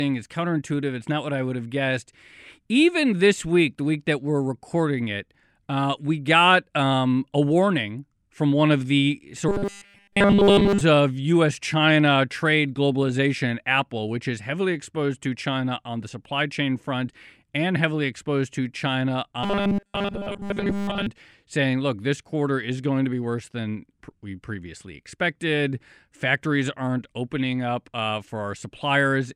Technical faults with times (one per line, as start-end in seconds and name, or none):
9.49-10.81 robotic sound from repeated short buffers
19.43-21.07 robotic sound from repeated short buffers